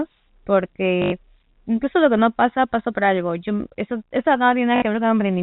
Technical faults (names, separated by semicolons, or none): packet loss with last packet repeated